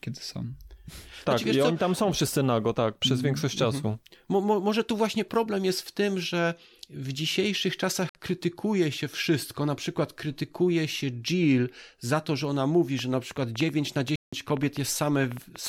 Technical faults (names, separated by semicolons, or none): Bluetooth dropout; train of clicks